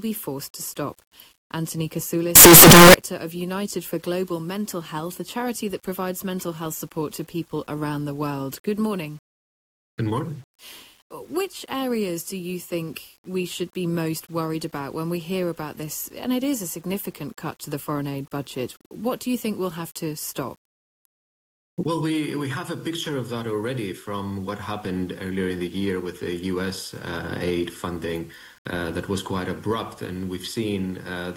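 From 2.36 s to 2.94 s the audio turns into a loud, harsh roar. The quiet moments in that stretch are as loud as the rest. This is most likely a signed and unsigned mix-up in 8-bit samples. Reading the top bit the wrong way moves the zero point to the edge of the range, so every zero crossing jumps from one extreme to the other.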